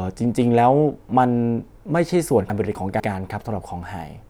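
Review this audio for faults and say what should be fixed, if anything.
Between 2.5 and 3.0 s the speech jumbles briefly: chunks out of order. One 250 ms chunk turns up a chunk late and plays after the one that should follow it. Nothing's missing, but the swap leaves three hard joins. To prevent it, sequence-number each chunk and reorder in a jitter buffer before playback.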